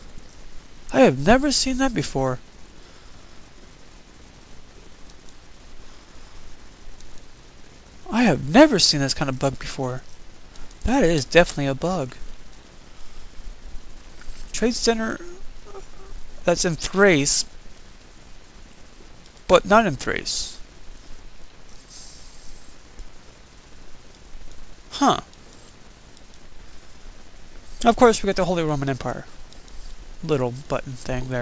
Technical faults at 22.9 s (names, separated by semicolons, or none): resampler restarted on every block